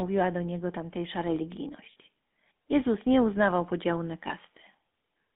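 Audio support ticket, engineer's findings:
GSM full-rate codec throughout: buzzy, gravelly roughness on the speech, band limited to roughly 200 Hz to 3.5 kHz, consistent with a 13 kbps GSM full-rate codec. Pulse-excited coarseness separates it from plain low-pass telephone filtering.

Lost GSM frames at 1.92 s (40 ms) and 4.28 s (20 ms, just after "nie uznawał podziału na"): brief rough metallic ring as the last good frame repeats. Unlike a dropout, the gap holds sound instead of going silent.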